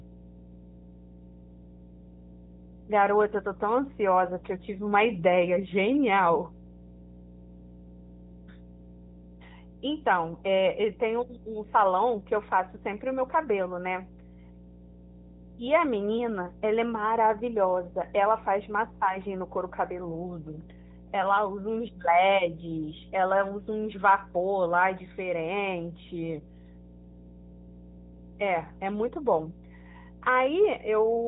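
Mains hum runs through the whole speech recording: a steady 60 Hz tone with low harmonics, sitting roughly 15 dB below the talker. It comes from a ground loop or nearby transformer feeding the power-line frequency into the signal path. The AMR narrowband mobile codec also affects the entire clip. Nothing passes above 3.8 kHz, and the voice carries a plainly audible buzzy, synthetic edge. This comes from pulse-driven vocal-tract modelling at a mid-range bitrate, which points to roughly 10 kbps.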